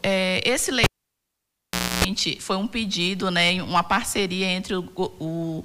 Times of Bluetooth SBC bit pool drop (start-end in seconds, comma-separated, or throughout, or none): none